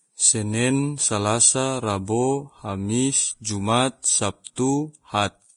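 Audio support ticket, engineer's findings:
Dull speech throughout, nothing above 10.6 kHz; likely low-bitrate audio saved at a high bitrate, a very low-bitrate first encode re-encoded as 192 kbit/s MP3, with the lost band unrecoverable.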